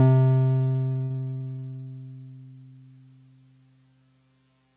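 From 0.52 to 1.88 s the music breaks up with repeated packet loss: about 25 gaps of up to 60 ms, filled by extending the preceding sound, which makes it choppy and robotic.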